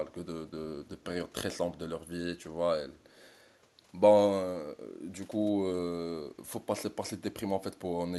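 From 2.98 to 3.13 s, a faint delayed copy of the speech, very far below it, trails about 354 ms behind, likely echo leak from a loudspeaker side's imperfect echo canceller.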